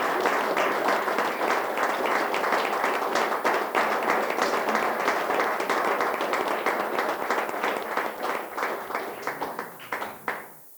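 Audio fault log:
Throughout, low bit depth with noise shaping: the sound is held at only 8 bits, and the rounding error from each sample is fed back so that the quantisation noise is pushed upward in frequency. The result is a steady, thin hiss that grows strongly toward the top of the band, sitting roughly 20 dB below the sound. On a spectrogram this shows as a constant noise floor tilting up into a bright band at the highest frequencies, with a fuzzy, grainy waveform trace.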